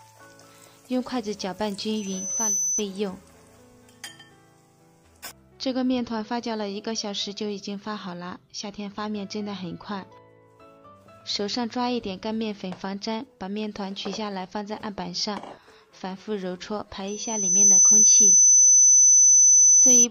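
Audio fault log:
1.96–2.83 s and 17.07–20.07 s, loudspeaker feedback squeal: a 6 kHz tone swells within about 0.7 and 0.5 seconds as the mic–speaker loop exceeds unity gain, rising well above the sound the second time.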